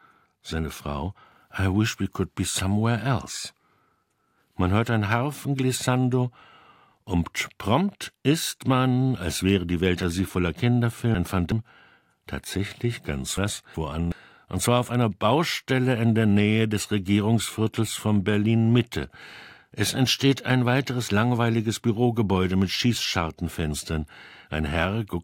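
Chunks out of order at 10.03 to 11.52 s and 13.38 to 14.12 s: a 0.37 s chunk plays three places late, then one place late between "tatsächlich ganz" and "und zwar auf einer". Each jumble has three hard joins.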